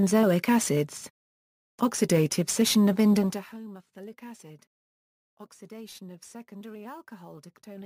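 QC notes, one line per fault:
3.18–3.58 s, zipper noise: a rapid ticking buzz rides on the sound as the level drops by roughly 20 dB. The fade moves in unsmoothed 1 dB steps, around 50 a second, and each abrupt jump leaves a small click.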